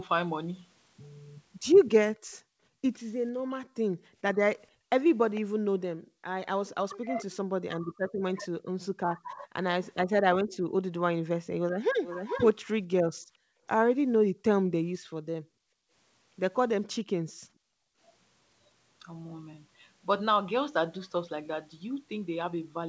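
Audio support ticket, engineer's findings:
Room tone dips out hard while far end plays, 2.18–8.74 s and 13.17–17.98 s; roughly 1.5 s and 2 s of gaps, up to about 39 dB down. Background gated by the echo canceller: AEC ducking the mic during loudspeaker activity, releasing after.

Talker's voice drops or chops at 3.31–3.64 s (about 30 dB), 6.82–11.54 s (roughly 1.5 s affected, up to about 40 dB), 16.93–17.10 s (about 30 dB). Speech suppressed in double talk, likely AEC failing to separate near talker from echo and attenuating both.

Delayed ghost of the voice, about 0.45 s behind. Brief scrap at 5.35–5.41 s, about 20 dB down; sustained 9.84–14.14 s, about 10 dB down. Echo leak, likely residual loudspeaker pickup passing the far end's canceller. Nothing above 8 kHz, consistent with G.722 at 64 kbps.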